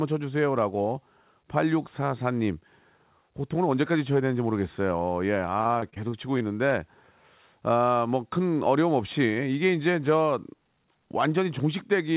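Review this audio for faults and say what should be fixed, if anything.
Repeated packet loss (robotic sound) hits the speech from 5.58 to 6.73 s: eleven packets went missing or arrived late, the longest hole about 41 ms, and each was patched by stretching the previous sound. That concealment covers about 18% of the stretch, making it choppy and robotic. The call codec's hard limit at 4 kHz is also audible and fits G.711 A-law. Preventing it means improving the network path or enlarging the jitter buffer so late packets still arrive in time.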